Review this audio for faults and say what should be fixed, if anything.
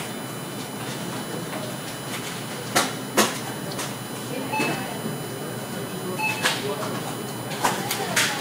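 A steady, fixed-pitch whine runs under the sound for the whole clip, built on 1 kHz with its strongest component at 10 kHz, roughly 10 dB below the wanted sound. This is USB whine: the bus's 1 ms frame timing pulls current in bursts, which leaks into the audio through shared power or ground. To prevent it, power the audio interface separately or fit a USB isolator or ground-loop breaker between the computer and the audio path.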